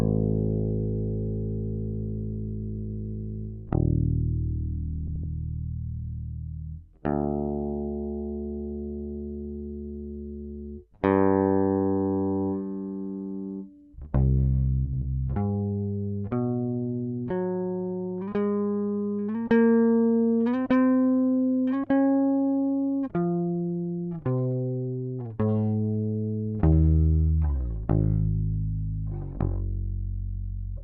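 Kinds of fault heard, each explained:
Frames out of order: two adjacent runs of four frames were decoded in swapped order, so short stretches near 5.1 s and 14.9 s play with halves exchanged as a garbled flutter.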